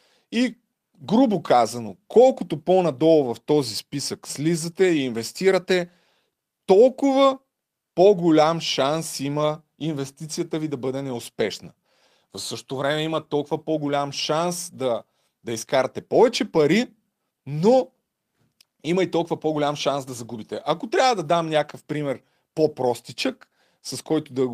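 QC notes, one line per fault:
No faults found for these QC notes.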